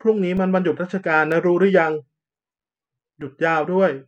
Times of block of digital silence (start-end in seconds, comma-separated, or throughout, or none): 0.37, 1.32, 3.21